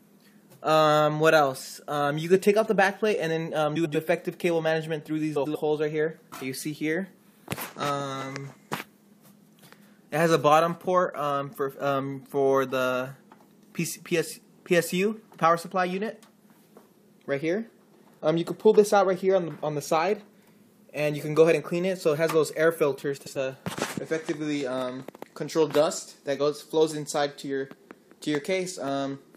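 At 3.75 to 3.96 s, 5.36 to 5.56 s and 23.17 to 23.36 s, frames out of order: two adjacent blocks of about 93 ms each, which fits runs of four frames, were decoded in swapped order. Each stretch plays with its halves exchanged, giving a brief garbled flutter. Unlike a dropout or skip, nothing is missing and no time is lost. The sound is all there, just rearranged.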